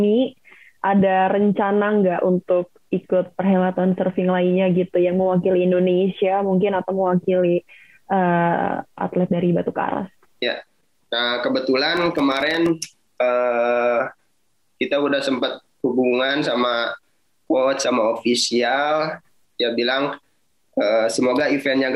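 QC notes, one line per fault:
11.97–12.69 s: processor overload crackle. A burst of gritty crackle tears through the sound for about 0.7 s. The processor missed some twenty buffer deadlines over that stretch, each leaving a hard-edged silent gap. The gaps point to buffers of roughly 1.5 ms.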